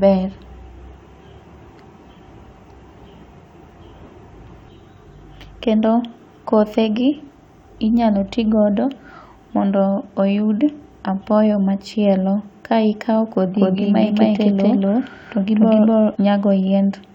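From 13.55 to 16.15 s the speech carries a doubled audio track: an equally loud, dry copy trails by roughly 300 ms, likely from a second capture path.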